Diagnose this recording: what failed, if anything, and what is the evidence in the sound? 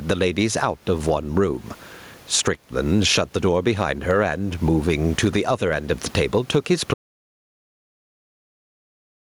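The whole clip shows gain pumping. The room noise sits about 36 dB under the speech. The swing is something like 15 dB. That points to the input stage: the mic gain is likely cranked far too high, with a fast limiter or compressor clamping each loud moment, so everything ends up squashed toward one level.

Then there's an audio dropout to silence from 6.94 s right through to the end. The speech stops mid-flow and what follows is silence, with no room tone at all, so this isn't a quiet passage. The likely story is that the input went away at the device or driver level, through a disconnect, a failed link or an accidental mute, while the recorder kept writing silence. Whatever happened after that point simply wasn't captured.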